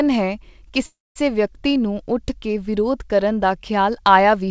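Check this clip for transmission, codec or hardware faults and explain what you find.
There is one fault, a call audio freeze, in this speech heard through a call codec that cuts everything above 8 kHz. From 0.86 to 1.18 s the speech stops. A short fading fill gives way to about 0.2 s of silence. The likely cause is delayed packets draining the jitter buffer. The speech then resumes where it left off, nothing lost, but everything after runs about 0.3 s late.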